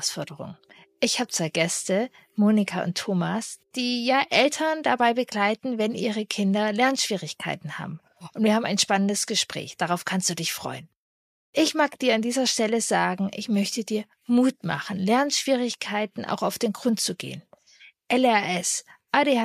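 No technical faults are audible anywhere in this audio.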